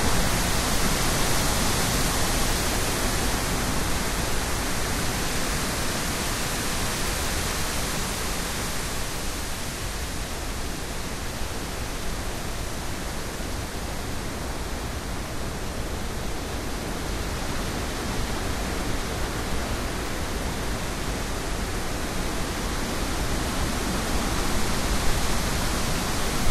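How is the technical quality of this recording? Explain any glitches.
Technical quality is held back by one problem that runs the whole length of the recording: MP2 compression damage, and it's plainly audible. The top end sounds dull and shut off, and there's a gurgling, granular roughness over everything. That's likely MPEG Layer II coding at a low rate, something around 80 kbps. It divides the sound into 32 sub-bands, runs short of bits, and switches whole upper bands off while coarsely quantising the rest. You get the same flickering, watery texture on low-rate digital radio.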